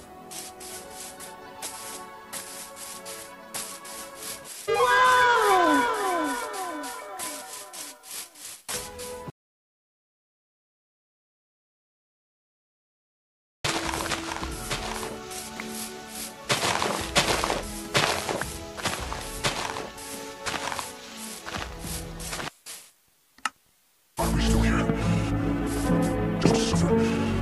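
At 9.3 s the sound cuts off abruptly, and it resumes at 13.65 s. The gap is an audio dropout to silence, lasting about 4.35 s. It is silence. No room tone or hiss remains underneath. The input likely disconnected or was muted while the recorder kept writing silence. Whatever happened during those seconds is lost. The return at 13.65 s comes in mid-flow, with no fade.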